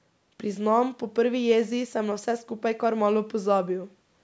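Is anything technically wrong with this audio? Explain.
No, the speech shows only the expected effects of call microphone processing, with the lowest bass rolled off by its high-pass filter and no content above 8 kHz.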